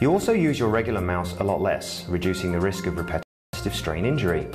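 At 3.23 s the audio drops abruptly to silence and stays there until 3.53 s, a gap of roughly 0.3 s. This is a rebuffering stall: playback consumed all the data it had received and had to wait for the next portion to download. When sound returns it picks up at exactly the point where it stopped, so no material is missing. The only effect is that extra pause inserted into the timeline.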